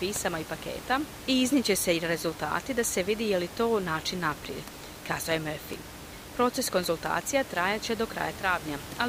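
Listening closely to the speech, nothing technical stood out, with the room's background noise sitting about 14 dB below the speech.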